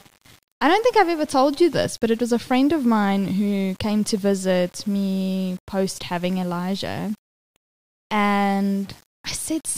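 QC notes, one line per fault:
Throughout: low bit depth without dither. The speech carries grainy distortion that moves with the signal, about 30 dB below it. Quiet tails turn gritty, and the softest moments drop to silence or sputter. The likely cause is rounding to 7 bits without dither, so the error tracks the speech instead of forming steady hiss.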